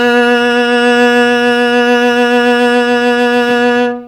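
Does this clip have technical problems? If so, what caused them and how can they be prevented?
Yes, this music plays throughout at the wrong sample rate. It was recorded at 32 kHz and played at 44.1 kHz without conversion, so it runs 1.38 times fast and about 5.5 semitones sharp. Tag files with their true rate and resample on playback.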